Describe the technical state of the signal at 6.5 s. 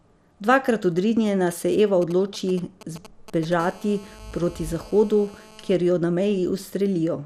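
At 6.5 s, as throughout the clip, the speech carries MP2 compression damage, likely from MPEG Layer II coding at a rate around 80 kbps starving its 32 sub-bands of bits. Nothing remains above 14.4 kHz, and the coarsely quantised bands give a dull, gurgling, granular distortion.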